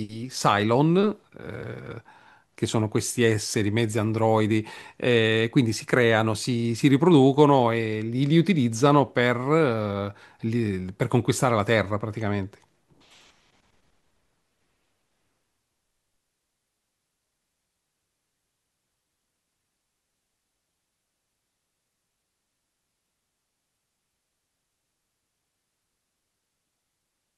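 Nothing in the speech stood out as a technical fault on listening.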